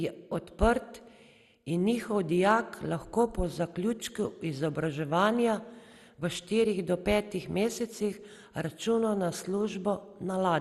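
From start to finish the speech sounds dull, with nothing above 12.2 kHz and a gurgling, granular roughness as upper bands drop in and out. This is likely MP2 compression starved of bits, consistent with a rate near 64 kbps, coarsely quantising the surviving sub-bands.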